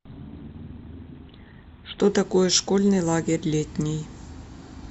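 A speech clip whose first 2.0 s are dull and smeary, then abruptly clearer: an adaptive stream starting at a low bitrate. The player began on a lean version to start quickly, which fits a low-rate Opus stream around 16 kbit/s, and switched near 2.0 s to a richer one, likely around 64 kbit/s, once the connection was measured. A spectrogram shows missing or blurred treble until 2.0 s, then full upper bands appear, with no gap in the waveform.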